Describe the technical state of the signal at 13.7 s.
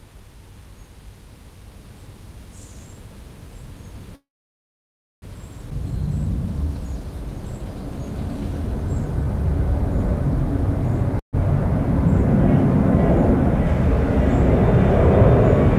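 The signal at 13.7 s is intact, with no technical fault audible at that moment.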